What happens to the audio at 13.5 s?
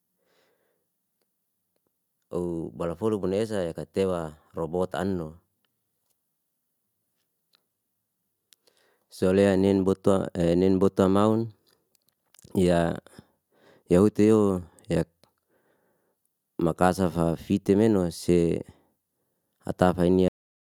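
Nothing goes wrong at 13.5 s; the speech carries on intact through that moment with no dropout, click, distortion or other fault.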